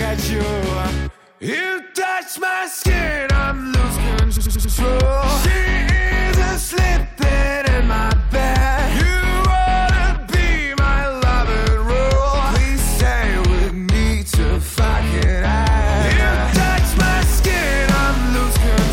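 From 4.35 to 4.73 s there is a stutter caused by repeated frames. A short stretch of compressed audio was played again, about 93 ms at a time, four extra times. This fits four frames being duplicated. The sound stalls and loops, adding roughly 0.37 s.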